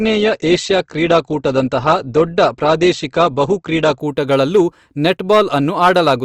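From the start to 4.0 s the speech has the sound of an adaptive stream starting at a low bitrate. The player began on a thin, heavily coded version. Nothing reaches above 8.2 kHz, which fits Opus at around 16 kbit/s, and the artefacts are coarse. At 4.0 s the quality jumps with no gap, consistent with a step up to about 64 kbit/s. On a spectrogram the treble band suddenly fills in.

Through the whole clip there is hard clipping. The signal was driven about 7 dB past what a stage could pass, so the loudest peaks, roughly one percent of samples, are sliced flat. This is heard as crackly grit on loud syllables. The waveform shows squared-off tops, and a spectrogram shows harmonic smearing at those moments.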